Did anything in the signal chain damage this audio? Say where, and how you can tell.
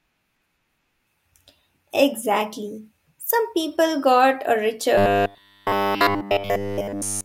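Yes. After 4.98 s, robotic sound from repeated short buffers, likely a starved buffer looping 10 ms. The spectrogram shows rigid 100 Hz harmonic stripes.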